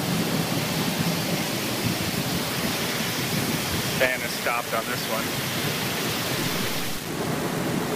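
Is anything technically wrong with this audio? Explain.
Yes. Throughout the clip the sound is coarse and grainy, with a gritty distortion that shifts along with the signal, and the quietest stretches sputter between steps or fall silent. This is likely low bit depth without dither: the samples were rounded to just 4 bits with no added noise, so the error tracks the signal and sits only about 10 dB below it.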